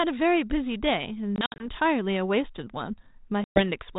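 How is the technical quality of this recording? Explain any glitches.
The recording has two bursts of packet loss on an ADPCM call, at 1.36 to 1.68 s and 3.44 to 3.62 s, over a 32 kbit/s G.726 telephone link that adds light codec hiss. Each burst cuts hard-edged silent holes, totalling 120 ms. In the first burst these are scattered across about 240 ms, with the longest gap 60 ms. After each hole the speech resumes with some roughness for a few tens of milliseconds. That comes from several lost packets leaving the decoder's adaptive predictor and step size out of step with the sender's until they converge again.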